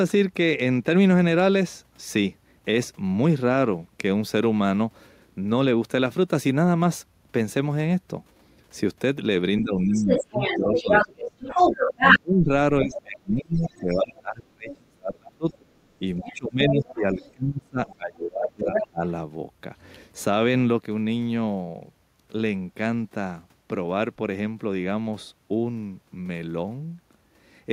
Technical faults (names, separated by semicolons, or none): speech suppressed in double talk; other side's voice leaking through